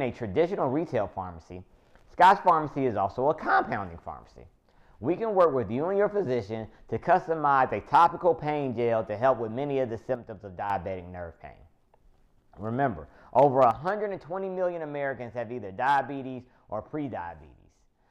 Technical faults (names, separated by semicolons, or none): one channel drops out